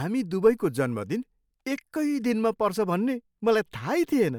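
No technical faults can be heard anywhere in the recording, so there is nothing to place in time order.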